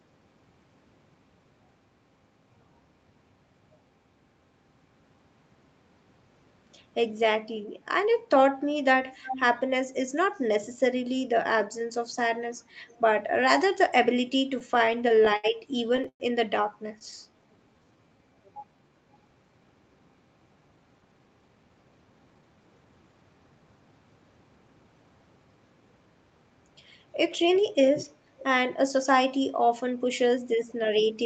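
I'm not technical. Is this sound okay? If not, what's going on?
No. The connection hiccupped in the middle of the clip, and there are signs of echo in three places.

Echo leak: It's likely that one side of the call was on a loudspeaker, and the echo canceller didn't catch everything its microphone picked up, so some of the sound was sent back. You hear a copy trailing about a third of a second behind: fairly noticeable from 9.25 to 9.42 s, barely there from 12.88 to 13.0 s, and faint from 28.39 to 28.44 s.

Repeated stalls (stutter): Pieces of the audio kept arriving late, so the receiving end ran out of sound to play several times. Each time it stretched the last bit of sound until more arrived. Nothing is lost, but the audio catches and drags. This happens with about ten small hitches between 14.59 and 15.46 s, then four longer ones between 15.88 and 16.22 s, where nearly half of that stretch is filler. 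Four tiny hitches follow between 16.99 and 17.28 s.

Jitter buffer slow-down: After the first two bursts of stalls, the receiving end deliberately played the sound a little slower to rebuild a safety reserve. It did this by repeating tiny slices of the sound. From 16.86 to 18.90 s the audio runs at about 87% speed, with the same pitch but drawn-out sounds, adding roughly a quarter of a second in total.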